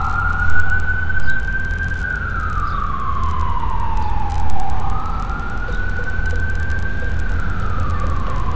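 Resampler restarted on every block, throughout: each 100 ms block converted from 48 kHz to 16 kHz separately, leaving edge errors heard as 10 Hz ticking under the sound.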